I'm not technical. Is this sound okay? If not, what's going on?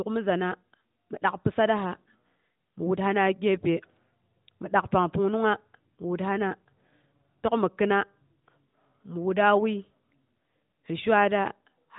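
Yes, this speech recording has no technical faults, and its narrow, phone-call quality, with nothing above about 3.8 kHz, is simply how the AMR narrowband mobile codec normally sounds.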